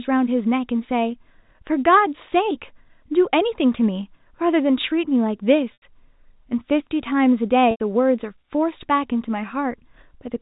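Packet loss with pitch repetition at 5.73 s and 7.71 s: the receiver repeats the last pitch period to bridge each 90 ms gap, fading it out over about 50 ms into silence before the speech returns with a short cross-fade.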